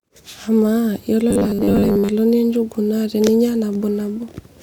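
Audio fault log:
1.31–2.12 s, robotic sound from repeated short buffers: the speech hardens into a stiff, metallic buzz pinned at 100 Hz, still tracing the rough shape of the words. This is likely caused by new audio arriving too seldom, so the playback repeats the last short slice to fill the gaps while the real audio is skipped. A 100 Hz buzz fits a slice about 10 ms long, and most of the stretch is made of these repeats.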